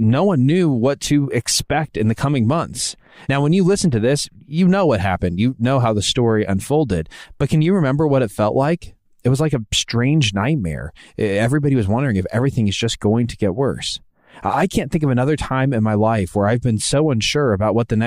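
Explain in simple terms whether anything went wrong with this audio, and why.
Nothing went wrong here: the speech signal stays steady and intact throughout, with no technical problems to be heard.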